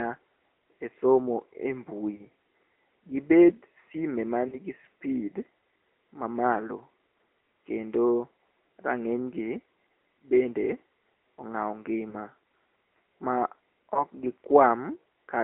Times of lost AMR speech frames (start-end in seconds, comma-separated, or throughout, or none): 2.16-2.26, 4.48-4.59, 12.10-12.15, 13.94-14.04